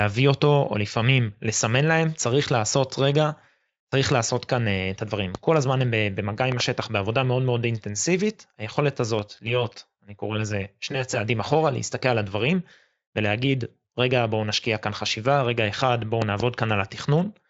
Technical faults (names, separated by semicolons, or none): loud pop; channel delay (comb filtering)